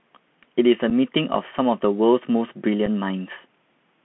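Bluetooth CVSD headset codec, throughout: one-bit slope coding limits the speech to roughly 150 Hz to 3.4 kHz, adding granular hiss and scratchy, overloaded sibilants. Unconcealed Bluetooth headset packet loss at 0.90 s and 2.86 s: each 7.5 ms gap, pointing to about one lost packet, leaves an abrupt hole in the speech.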